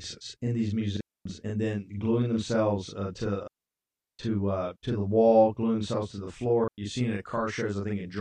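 Speech runs through the whole clip with a constant doubling. One channel arrives about 40 ms late, and once the two are summed to mono, that late copy sits right behind the original at equal level. This is channel delay (doubling), and it gives a thick, slapped quality. Three digital wireless dropouts cut clean holes of near silence: 0.97 to 1.26 s, 3.43 to 4.19 s, and 6.64 to 6.78 s. The longest lasts about three quarters of a second. Each is a receiver mute after lost data, with a very short fade and no noise burst around it.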